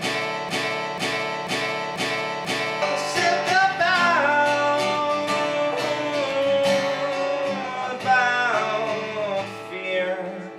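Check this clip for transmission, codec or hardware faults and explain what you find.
One fault is present. A broken-record loop runs from the very start to 2.82 s, already under way when the clip begins. The likely cause is a player, encoder or stream that stalled and kept resending its last held fragment. A 0.49 s piece repeats exactly, five times back to back, and the audio that belonged in that span is lost.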